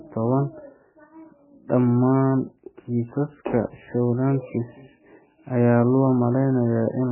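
Throughout the clip, the speech carries heavy damage that sounds like MP3 compression, likely at a very low bitrate near 9 kbps. Nothing survives above 3 kHz, so the treble is gone, and weak frequency lines flicker in and out between frames, giving a watery, swirly texture with smeared consonant onsets.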